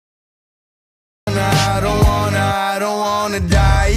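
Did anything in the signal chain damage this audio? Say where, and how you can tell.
Yes. A cut-off start at the capture stage: the first 1.27 s is digital silence, then the sound begins abruptly at 1.27 s with no natural attack or fade, because recording began late. The waveform shows a flat line jumping straight into the sound mid-waveform; the spectrogram shows a hard vertical edge.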